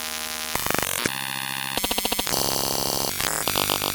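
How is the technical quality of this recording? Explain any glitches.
No technical problems can be heard in this recording. There are no glitches to explain.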